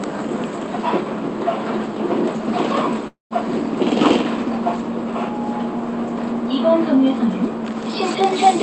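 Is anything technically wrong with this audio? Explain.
Yes, there are two faults in these everyday sounds, heard through a call codec whose top end stops around 8 kHz.

Call audio freeze, 3.07 to 3.34 s: likely late packets draining the jitter buffer. The last sound is stretched into a fading buzz, then about 150 ms of silence. Nothing is lost, but everything after lands roughly 0.23 s later.

Hard clipping, 8.22 to 8.50 s: peaks driven about 5 dB past the limit are sliced flat, adding high harmonics that give those loud moments a harsh, crackling edge.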